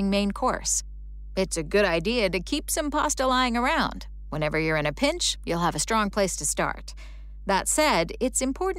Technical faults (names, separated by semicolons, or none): mains hum